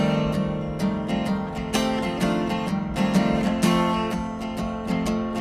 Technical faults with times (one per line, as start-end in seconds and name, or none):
none